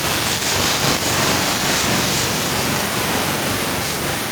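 From the start to the end, every syllable has a close, equally loud double about 42.7 ms behind it, giving a slapped, doubled edge. This is channel delay (doubling): one channel runs late, which fits a 2048-sample buffer at 48 kHz, and the two are summed to mono.

From 2.74 s to the end, the speech comes back again roughly every 300 ms, peaking about 12 dB below the direct sound. This is feedback echo between two devices: one device plays what the other's microphone sent, that microphone captures it again, and neither echo canceller removes the other device's output.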